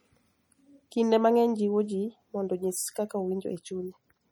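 Throughout the speech, the sound is watery and swirly, with metallic chirps on s sounds and smeared attacks. The likely cause is MP3 compression at a low bitrate, fitting about 48 kbps. Weak frequency lines drop in and out between frames.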